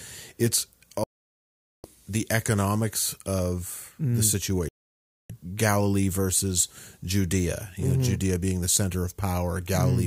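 At 1.04 s the speech drops to silence with a roughly 3 ms fade, a digital broadcast dropout where the receiver muted on failed frames. It resumes at 1.84 s on "the economics of mm". A second gap follows "economics of mm the", from 4.68 to 5.30 s.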